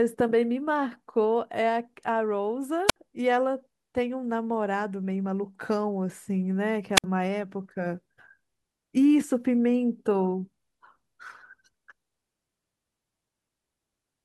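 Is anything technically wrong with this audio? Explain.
Yes. There are two wireless microphone squelch dropouts, at 2.87–2.96 s and 6.94–7.04 s. Each time, the radio link from the FM microphone weakens until the receiver's squelch cuts its output, then reopens once the signal recovers. You hear a short surge of hiss or static as the carrier fades, then a hole of near silence lasting about 62 ms and 58 ms respectively, before the speech snaps back.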